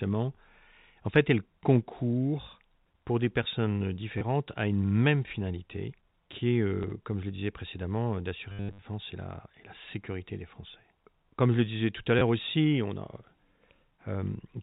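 Packet loss with the last packet repeated shows up at 4.18–4.21, 6.83–6.91, 8.5–8.82 and 12.19–12.21 s. The receiver keeps replaying old audio, giving robotic stutters and small blips. The longest, after "je le disais précédemment", buzzes at about 100 Hz, which fits 10 ms packets. It's heard through a G.711 telephone band that stops at 4 kHz.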